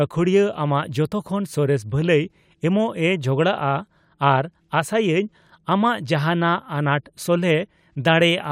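Speech recording; no technical faults detected.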